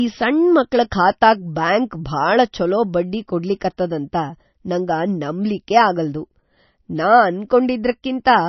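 From start to finish the speech sounds watery and swirly, with smeared attacks and a hard treble ceiling near 5.9 kHz, which fits heavy MP3 compression at a low bitrate, likely around 27 kbps. A spectrogram shows a flat cutoff plus flickering, patchy high bands.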